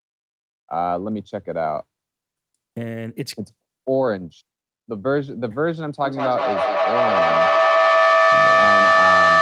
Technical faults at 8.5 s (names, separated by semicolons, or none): feedback echo between two devices